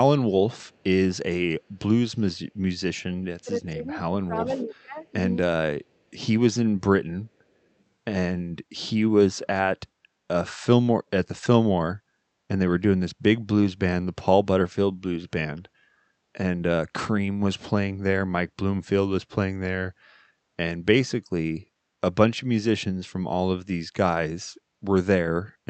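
From 0.62 to 0.83 s, a very faint delayed copy of the speech trails about 452 ms behind the original, far below the main level. This is an echo leak. The far end was likely playing the call over a loudspeaker, and its echo canceller let a small residue of what its microphone picked up slip back down the line.

Between 3.43 and 5.05 s the speech repeatedly dips by as much as roughly 20 dB, about a second and a half in total, thinning and breaking up in pieces. This is speech suppressed in double talk. Both sides were talking at once, and the echo canceller, likely unable to tell the near talker from the loudspeaker return, turned everything down together.

Inside that stretch, at 4.60 to 4.65 s, a brief echo leak slips through with the same 452 ms delay. It is much more prominent this time.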